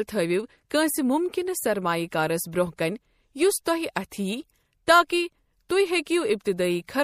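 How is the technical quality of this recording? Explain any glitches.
The recording has one audible problem, and it runs through the whole speech clip: MP3 compression. The encoder was most likely starved of bits, to a degree that fits a bitrate around 64 kbps. It cut off the treble above a fixed frequency and dropped quieter frequency lines, which flicker on and off from frame to frame. The result is plainly audible: dull, watery speech with a swirling texture, metallic chirps on s sounds, and softened consonant attacks.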